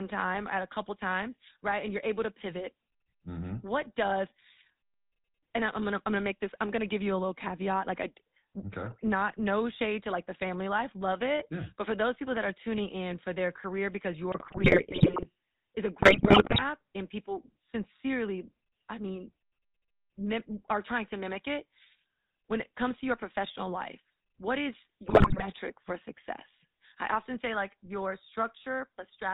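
From start to finish the speech carries GSM full-rate codec damage, pointing to 13 kbps coding. Nothing passes above 4 kHz. The pulse-driven excitation leaves a buzzy, gravelly roughness.

GSM bit errors hit from 14.32 to 15.27 s, after "for their career because", before "is a". Again 16.02 to 16.63 s, before "and people sincerely I". Last, 25.06 to 25.47 s, after "professional life what is". Corrupted filter, pitch and gain values distort frames into squawks, pops and gargling.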